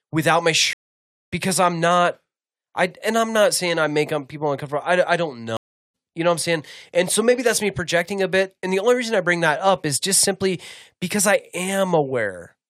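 Stream reconnects at 0.73 to 1.30 s and at 5.57 to 5.94 s. After "without my" the speech cuts to silence for 0.56 s, then resumes at "because I'm not I", roughly 0.7 s further on. After "uncomfortable I I don't" a second gap of 0.37 s follows, skipping ahead about 0.4 s. Each time the connection dropped, the player reconnected and began decoding afresh at a later point in the live stream, so the missing stretch of speech never returns.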